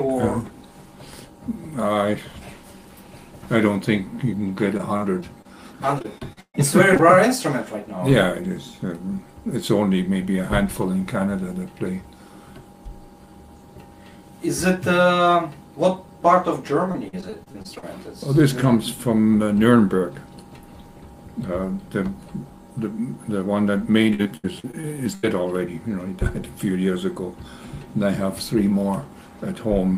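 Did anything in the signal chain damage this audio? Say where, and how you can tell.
Yes. Repeated packet loss (robotic sound) appears at 4.77–5.47 s, 5.99–6.56 s, 16.92–17.84 s and 24.14–25.25 s, which points to the network stage. Within each stretch, holes follow one another closely, and the receiver patches each by extending the last sound. The result is choppy sound with pieces missing. The 5.99–6.56 s stretch is worst: roughly 40% of it is synthetic fill, with one gap of 132 ms. The other stretches have gaps up to 39, 45 and 78 ms.

Short concealed packet loss occurs twice back to back, at 6.94–6.97 s and 6.97–7.01 s, just after the second robotic stretch. Each event loses about 20 ms in transit. The decoder bridges the hole by continuing the preceding waveform, following its pitch where it was voiced or using shaped noise where it wasn't, then crossfades back into the received audio. 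What you hear is a brief smear or wobble rather than a clean dropout, again pointing to network delivery.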